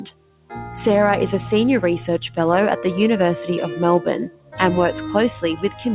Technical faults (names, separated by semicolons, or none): noise suppressor applied to music or sounds; sound cut by the noise suppressor